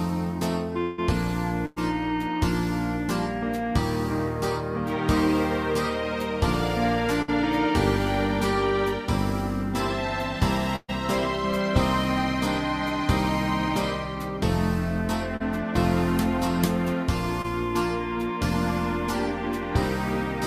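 A long network dropout is the likely cause of the gap at 0.81 to 1.00 s: the sound freezes into a held buzz or hiss that fades over about 0.16 s, then the audio resumes with roughly 160 ms skipped. Bursts of packet loss occur at 1.66 to 1.78 s, 7.22 to 7.30 s and 10.76 to 10.90 s, removing about 100, 60 and 120 ms respectively. Each time the receiver stretches the last sound into a dimming buzz or hiss, and the final 20 ms of the third gap falls fully silent before the audio picks up further on. Short concealed packet loss appears at 15.36 to 15.42 s and 17.42 to 17.46 s, where about 40 and 20 ms of audio missed the decoder. The gaps are patched by continuing the preceding pitch or shaped noise and blending back, which is heard as a brief smear or wobble.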